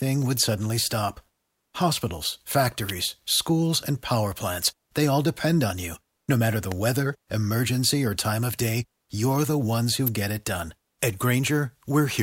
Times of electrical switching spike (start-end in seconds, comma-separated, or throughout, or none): 2.89, 6.72, 10.07